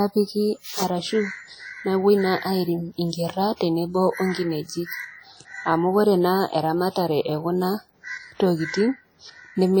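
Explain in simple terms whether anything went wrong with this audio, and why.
Throughout the speech there is a ringing, washy quality and a hiss that rises and falls with the voice. That points to heavy WMA compression as the likely cause: the encoder stored too little detail, so its rounding noise smears across each short stretch of sound.

At 3.56 to 3.61 s, just before "tenebo o", a brief hiss of about 44 ms arrives ahead of a sharp onset. This is pre-echo: the codec spread noise meant for the loud attack into the quiet moment before it, softening that attack.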